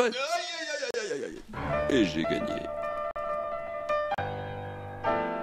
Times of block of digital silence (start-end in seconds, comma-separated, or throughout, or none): 0.91-0.94, 1.90, 3.11-3.16, 4.14-4.18